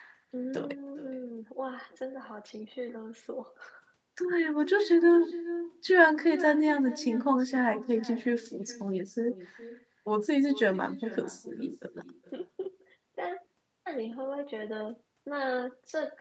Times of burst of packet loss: none

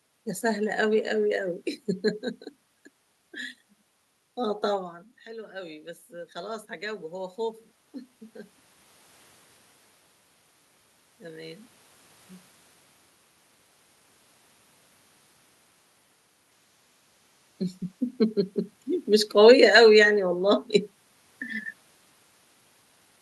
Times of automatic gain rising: 4.70-7.44

